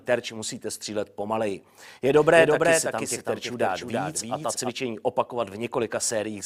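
From 2.16 s to 4.70 s the audio carries a doubled audio track: a full-band copy trails about 300 ms behind, roughly 5 dB quieter, with no decay or room colour, cutting in and out abruptly. The likely cause is a second, slower capture path or an edit holding two offset copies.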